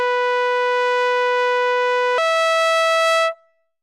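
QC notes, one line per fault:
2.18–3.83 s, section at the wrong speed: the music runs 1.32 times fast, tempo and pitch rising together by about five semitones, likely from playback against the wrong clock.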